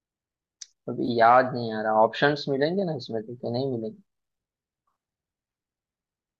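At 1.06 to 1.09 s, the speech briefly smears into a noisy, phasey patch. This is AAC frame loss with concealment. About 20 ms of audio never arrived, which fits two lost frames of roughly 10 ms each, likely from the low-delay AAC stream carrying the speech. The decoder covered the hole by reusing the last good spectrum with altered phase. The loss was too short to fade to silence. The sound returns right after.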